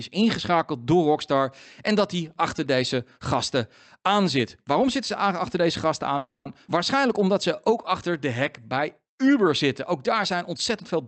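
At 6.17 s the sound stalls until 6.47 s in a call audio freeze. The likely cause is packets held up in transit until the jitter buffer ran dry. The receiver extends the last sound as a fading buzz that sinks into roughly 160 ms of silence, and the whole stall lasts 280 ms. Nothing is lost; the audio simply resumes later. On a spectrogram, the harmonics smear into a decaying band and then go blank, and the waveform shows a tapering envelope followed by a flat line.

Between 6.67 and 6.70 s comes a skip ahead. A short stretch of audio, on the order of 70 ms, was discarded while later packets were already waiting, probably as the buffer shed some of the delay it had just built up. Playback leaps forward with only a tiny filled gap, so the sound is clipped and the two sides are butted together. A spectrogram shows an abrupt discontinuity in the formant tracks, and the waveform shows a sudden change in shape with no pause.

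From 7.01 to 8.08 s there is a jitter buffer slow-down. The buffer is rebuilding its reserve by repeating individual pitch periods, which adds 52 ms in total and runs the audio at about 96% speed with the pitch unchanged. Sounds feel slightly stretched. On a spectrogram the harmonics keep their spacing but stretch in time, and the waveform shows near-identical cycles repeated back to back. Throughout, content above 8 kHz is cut off, which fits an Opus call codec.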